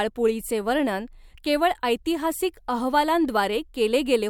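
No technical faults can be heard anywhere in this speech recording. There are no dropouts, clicks, distortion or timing problems at any point.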